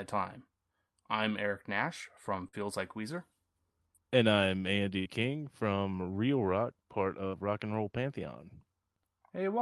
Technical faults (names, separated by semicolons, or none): burst of packet loss